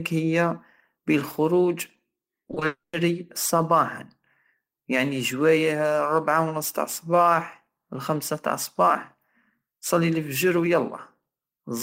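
From 2.48 to 2.62 s the speech turns choppy. This is repeated packet loss. Several short holes, none longer than 20 ms, are patched by stretching the previous sound. About 60 ms is concealed, over 40 percent of that stretch.

At 2.66 s a long network dropout is the likely cause of what follows. About 270 ms of speech never arrives. A fading buzz or hiss fills the hole, then 90 ms of silence. Sound resumes at 2.94 s, with the lost part simply gone.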